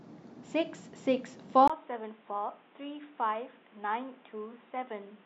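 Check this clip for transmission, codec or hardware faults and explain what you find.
One fault. At 1.68 s, after a 20 ms gap, the speech turns quieter and boxy, with nothing above 3.8 kHz and new faint background noise. The input likely switched to a poorer device.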